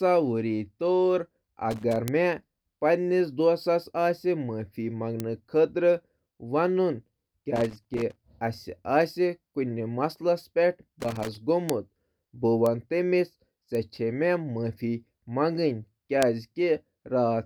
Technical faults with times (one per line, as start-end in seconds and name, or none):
1.71-1.96 loose connector crackle
2.08 bit error spike
5.20 bit error spike
7.56-8.22 loose connector crackle
11.00-11.38 loose connector crackle
11.69 bit error spike
12.66 bit error spike
13.75 bit error spike
16.23 bit error spike